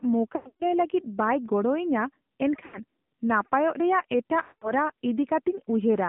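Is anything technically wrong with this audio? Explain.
Yes. The whole clip has passed through the AMR narrowband mobile codec. The speech was squeezed into an 8 kHz-sampled vocal-tract model rebuilt from a few coded pulses per subframe, and the line passes only about 150 Hz to 3.6 kHz, so everything above that is gone. The buzzy, synthetic edge on the speech, plainly audible throughout, points to one of AMR-NB's low modes, around 7.4 kbps.

There are also lost AMR speech frames in three places. In each, corrupted frames were discarded and the decoder filled the gap by repeating its last good pitch and spectral settings while ramping the gain down. From 0.36 to 0.64 s the losses are scattered, with the longest unbroken stretch about 120 ms, so the sound smears, warbles and sinks toward silence. At 2.66 to 2.79 s a shorter gap gives a brief drawn-out dip. From 4.42 to 4.71 s the sound stretches and fades out, then returns weak or rough.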